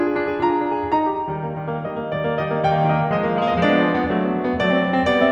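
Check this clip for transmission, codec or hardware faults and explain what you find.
There's one fault in this music clip, running the whole way through. The resampler restarted on every block: each 100 ms chunk was converted separately, probably from 48 kHz down to 44.1 kHz, so every block edge picks up a small error, heard as steady ticks at 10 Hz over the music.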